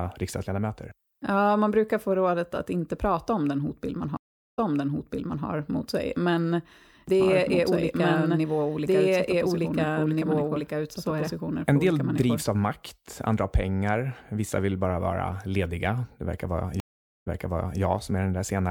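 At 4.17 s and 16.8 s a stream reconnect leaves a flat, blank gap (0.41 s, then 0.46 s). The restarted decoder resumes 0.89 s and 0.55 s earlier, replaying speech. From 7.2 to 12.42 s a doubled audio track adds an equally loud copy about two seconds behind, likely from a slower capture path. On the spectrogram the copy shows as repeated, offset shapes that start and stop abruptly.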